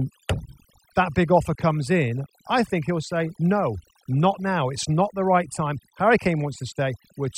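Overdone noise removal runs through the whole speech clip: bands near the noise floor get gated away, so pauses fall to twinkly near-silence.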